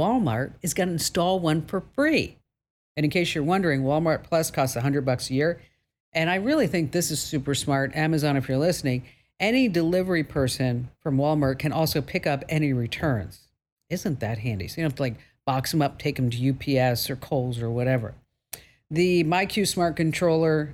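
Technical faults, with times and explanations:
No technical faults detected anywhere in the speech recording.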